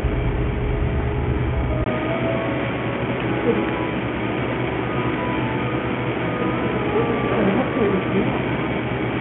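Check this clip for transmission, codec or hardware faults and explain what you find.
Two faults are audible: codec damage across the whole clip, and a drop in quality from 1.84 s to the end.

Bluetooth SBC compression runs throughout. The treble is unstable and keeps flickering in and out, and a gritty, aliased grain sits on the sound. SBC splits the signal into a few broad sub-bands and allocates bits without any model of hearing. With a small bit pool, the weak upper bands get almost nothing and the rest are coarsely quantised. The heavy damage points to a low bitrate, likely around 48 kbps.

An input switched to a poorer device at 1.84 s. The audio drops out for a 20 ms gap, then returns dull and boxy, with nothing above 3.3 kHz. A new background noise floor sits roughly 35 dB below the signal, and the level stays about the same. This is likely a change of input device, such as another microphone or a headset's call profile. 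That device's narrow passband and its own noise carry through to the end of the clip.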